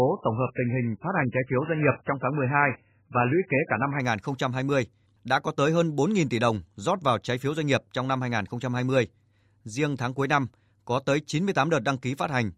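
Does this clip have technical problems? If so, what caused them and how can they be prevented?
Yes. From 0.0 to 4.0 s the speech has nothing above 3 kHz and heavy coding artefacts, and then the quality jumps abruptly with no gap, the mark of an adaptive stream starting at a low bitrate. The player chose a very low-rate version to begin playback quickly, and the sound points to roughly 8 kbit/s MP3, before switching to a version consistent with 128 kbit/s once it had measured the connection. Prevent it by having the player start on a higher-quality version or briefly buffer that version before playback begins.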